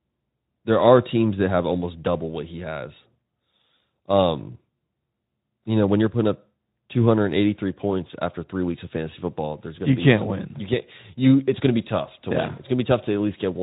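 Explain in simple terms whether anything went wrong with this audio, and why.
Nothing went wrong with this speech recording from a technical point of view: it was carried by Speex, an older speech codec used for internet calls, which leaves only light traces of its compression, and nothing else in the signal stands out as damaged.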